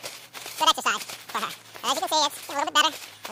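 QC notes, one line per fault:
Throughout, audio read two samples at a time (double speed): the whole clip plays twice as fast as it should and sits a full octave, 12 semitones, above its natural pitch, so everything sounds rushed and chipmunk-like. The reader is taking each pair of consecutive samples as a single frame, as if the stream held two channels or samples of double width. Half the expected frames are produced, so playback finishes in half the time at twice the pitch.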